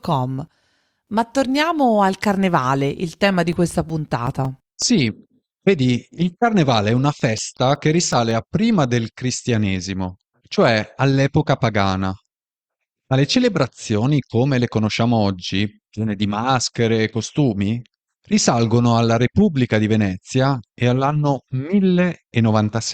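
A scratch on the disc defeats its error correction once per revolution, so the player conceals the bad samples, producing CD scratch ticks in this speech: regular ticks, about six a second and up to roughly 10 ms long, from 3.34 to 4.82 s after "torniamo al carnevale il" and from 7.01 to 8.31 s after "vedi il carnevale è".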